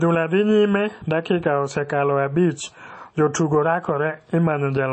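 A speech recording whose band stops dead at about 8.3 kHz for its whole length, with the smeared, swirly coding artefacts of a starved encoder. It is likely low-bitrate audio saved at a high bitrate: the losses fit an MP3 at around 32 kbit/s re-encoded at 320 kbit/s, and the second pass cannot restore what the first discarded. On a spectrogram, a flat ceiling at 8.3 kHz shows empty space above, with blurred, patchy energy below.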